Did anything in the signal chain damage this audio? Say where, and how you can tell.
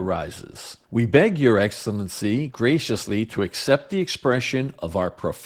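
Yes. The codec stage did it: Opus voice compression throughout the clip. The speech is hoarse and slightly robotic from start to finish, which fits hybrid mode at around 16 kbps, where SILK codes the lower band's excitation coarsely beneath a sparse CELT layer.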